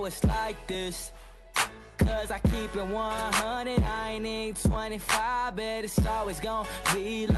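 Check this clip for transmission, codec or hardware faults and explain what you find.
Nothing here points to a transmission, codec or hardware problem; the audio comes through a WebRTC call path using Opus at 48 kbps, with the top end rolling off around 12 kHz as that setting would give, and there's nothing beyond that to flag.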